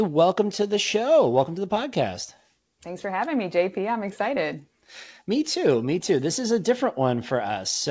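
Nothing stood out on listening to this speech, which arrives over a WebRTC call path with no content above 8 kHz, as fits a G.722 codec at 64 kbps.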